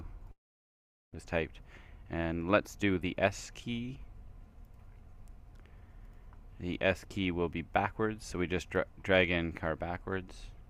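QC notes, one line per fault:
0.31–1.17 s, long network dropout: the sound gives way to a fading buzz, then near-silence, and resumes with a stretch of roughly 0.6 s missing. This is likely a gap in arriving packets, with the receiver extending the last sound before falling silent.
1.25–3.32 s, jitter buffer speed-up: the sound runs at 110% speed with pitch unchanged and can seem hurried. The receiver cut short pitch-period pieces repeatedly, removing around 0.2 s, to drain the extra delay built up after the gap.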